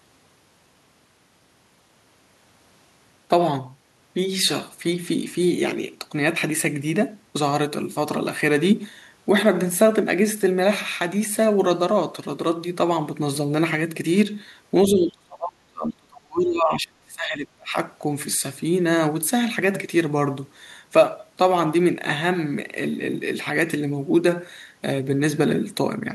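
Speech suppressed in double talk, 14.87 to 17.76 s, in this speech clip: the voice sinks by around 30 dB, likely an echo canceller turning down both talkers at once.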